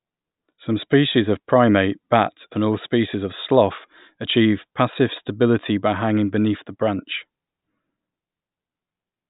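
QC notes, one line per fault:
Nothing to flag here; the speech comes across without any technical problems worth a line.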